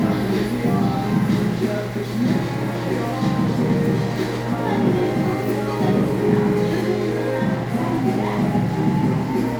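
From 1.29 s to 9.23 s the sound carries a rough, metallic edge. That is periodic clock jitter: interference modulating the converter clock at about 2 kHz adds sidebands around every component.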